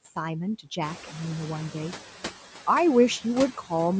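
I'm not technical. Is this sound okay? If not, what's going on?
No, there are two problems. All the way through, the background noise dips in the pauses and swells back up whenever the person talks. This is noise suppressor artifacts. A noise-reduction step turns down whatever it judges to be steady background noise, moment by moment. Because it keeps adjusting as the voice comes and goes, the noise pumps up and down instead of fading cleanly away.

The second problem starts around 1 second in, when the room's background noise suddenly gets louder. From 0.81 to 1.99 seconds that louder noise comes through more strongly than it should, then settles down. This is the noise suppressor catching up. The noise reducer's sense of what the background sounds like was out of date, so it took about 1.2 seconds to learn the new, louder noise and start turning it down properly.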